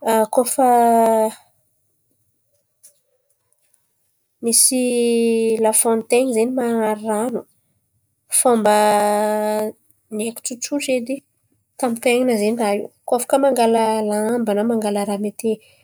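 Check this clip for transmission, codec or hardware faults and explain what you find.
Nothing in the transmission, coding or playback hardware disturbs this speech recording at any point, so there is nothing to report.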